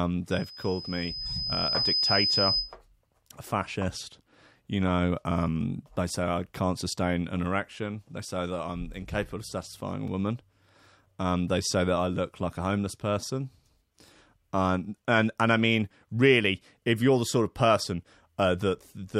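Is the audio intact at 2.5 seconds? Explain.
No. At 2.5 seconds the speech is under a loudspeaker feedback squeal running from 0.31 to 2.75 s. A microphone-to-speaker loop exceeds unity gain at 5 kHz, so a pure tone swells over about a second and a half and ends up a few decibels louder than the speech.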